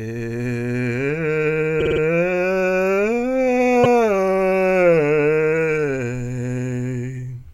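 A run of compressed frames was written more than once in this music clip, so the decoder replays the same stretch and the track stutters: repeated frames. From 1.79 to 2.0 s, a 52.2 ms block, which fits two compressed frames, plays four extra times and adds 209 ms. At 3.83 to 3.93 s, a 104.5 ms block, which points to about four frames, repeats once and adds 104.5 ms.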